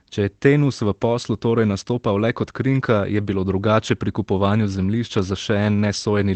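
At 3.87 to 3.89 s, a lost packet was rebuilt from error correction, so no gap is heard, but this 20 ms stretch of speech sounds briefly rougher and noisier.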